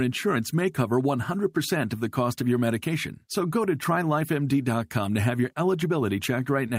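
Nothing in the speech stood out as a technical problem on listening.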